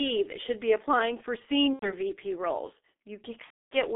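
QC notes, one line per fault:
Throughout, G.723.1 codec: the speech sits in a narrow telephone band, roughly 250 Hz to 3.5 kHz, coded at around 6.3 kbit/s, and the damage is heavy. Nothing above 3.5 kHz survives, so it's muffled, and because the codec only refreshes its model of the voice every 30 ms or so, the tone comes out hoarse and consonants smear into each other instead of landing crisply.
1.73 to 1.93 s, VoIP packet loss concealed by the speech codec: a gap of about 90 ms, consistent with three 30 ms frames dropping, got filled by the decoder guessing forward from the last pitch and filter it had. That's why the sound stretches into a buzzy tone or coloured noise that fades there, and the speech stays thin and a bit off for a short stretch after the packets return, since each frame leans on the one before.
3.44 to 3.77 s, VoIP packet loss concealed by the speech codec: same mechanism, but a much longer hole, about 270 ms, which fits nine frames going missing. 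The decoder extrapolates and turns the gain down frame by frame, then mutes from the third lost frame, so what you hear is a short buzz or coloured noise sinking away into silence, with the speech weak and distorted well into the recovery near the end of the clip.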